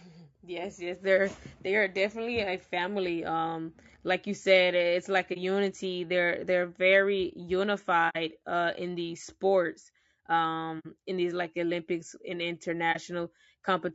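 Throughout, the speech sounds rough and grainy, with noise filling the gaps between harmonics and a thin, synthetic top band. That is plainly audible low-delay AAC compression, likely AAC-ELD at around 32 kbps. On a spectrogram, the harmonic lines look smeared and speckled.

At 5.33, 8.09, 10.79 and 12.92 s, the sound fades briefly out and back in. Each is an AAC frame loss with muting, where the decoder zeroed the missing spectrum. The gaps last about 30, 60, 60 and 30 ms, which fits one or two lost frames. They show as soft-edged notches in the waveform and vertical blank strips on a spectrogram.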